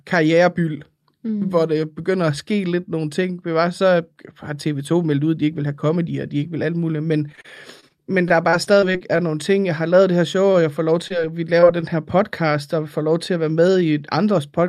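A speech recording turns choppy and robotic in two stretches, from 7.29 to 7.92 s and from 8.28 to 9.20 s. The sound has a stuttering edge, with small pieces of the talker missing. This is repeated packet loss. In each stretch there are six separate gaps, none longer than about 29 ms. The receiver patched each one by extending the last sound, about 111 ms in the first run and 118 ms in the second, but 60 ms and 80 ms of real audio never arrived. Because the holes come so close together, the patched segments follow one another closely and produce that synthetic quality. Later, at 11.08 to 11.12 s and again at 11.60 to 11.64 s, there are two brief smears, each a short wobble lasting a couple of hundredths of a second. These are short concealed packet losses. Roughly 20 ms of audio went missing each time, and the decoder covered it by continuing the preceding sound for 18 ms and 23 ms before blending back into the real signal. 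Right after, at 11.80 to 11.84 s, a sound is held slightly too long. That is a short stall from a late packet. The jitter buffer ran dry when a packet arrived about 18 ms behind schedule, so the last sound was stretched by 18 ms until it came. Playback then resumed from the same point, and nothing was lost.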